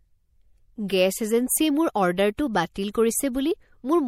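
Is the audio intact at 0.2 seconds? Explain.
No. At 0.2 seconds the speech carries plainly audible damage, and it runs through the whole clip. The sound is watery and swirly, with the treble dulled. This is likely MP3 compression at a low bitrate, consistent with about 64 kbps. With so few bits, the encoder cuts the high frequencies at a fixed point. It also drops weak frequency components, which flicker on and off from frame to frame. That flicker causes the swirl.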